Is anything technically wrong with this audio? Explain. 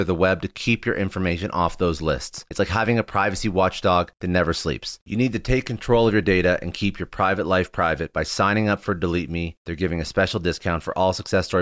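No, nothing is technically wrong with this audio.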